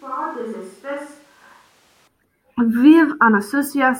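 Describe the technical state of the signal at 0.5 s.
At 0.5 s the speech sounds roomy and hollow, thin in the bass, about 10 dB quieter, with room noise sitting about 25 dB below it. This runs from the clip's start to 2.08 s, then cuts back abruptly, likely a switch to a distant microphone.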